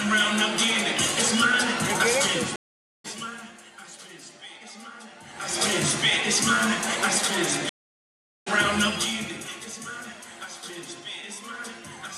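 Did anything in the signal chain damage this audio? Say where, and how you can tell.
Yes. At the network stage there are two stream reconnects. A gap of 0.48 s at 2.56 s and one of 0.77 s at 7.69 s each resume later in the material, by about a third of a second and about 0.7 s. This points to a dropped connection and a fresh decoder joining the live stream.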